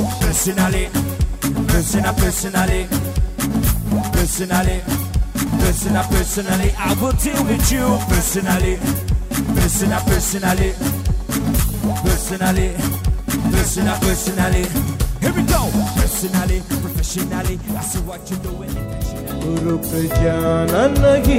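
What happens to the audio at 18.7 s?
Nothing goes wrong at 18.7 s; the audio continues intact through that moment with no audible fault.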